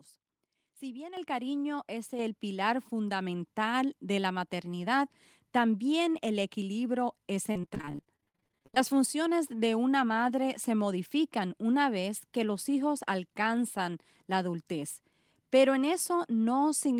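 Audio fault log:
1.17 s and 2.19 s, microphone volume stepped up: the input gain jumps twice in a single step, by about 9 dB and then about 5 dB. The call software judged the microphone too quiet, so voice and background rise together abruptly.
7.51–8.78 s, repeated packet loss (robotic sound): a rapid string of short holes, the longest about 50 ms, each patched by stretching the previous sound. About 0.55 s is filled this way and about 0.58 s is lost outright, giving choppy speech with pieces missing.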